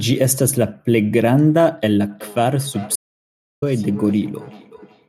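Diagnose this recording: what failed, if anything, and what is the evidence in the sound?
Feedback echo between two devices, from 2.09 s to the end of the clip, is a call-processing failure. The speech returns at a regular interval of roughly 400 ms, each pass thinner and more ringing, with the loudest repeat about 20 dB below the direct speech. A second device in the same room is playing this call's audio, and this microphone picks it up again. The local echo canceller removes only what its own device plays, so that foreign copy passes through and recirculates.

Audio dropout to silence, from 2.96 s to 3.62 s, is a 0.66 s hole of silence with no room tone, and even the echo tail stops dead. This points to the input stage rather than the codec or network. The capture path was likely lost through a dropped device, a failed link or a momentary mute while the recorder kept writing silence. 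Whatever was spoken or echoing during that gap is gone.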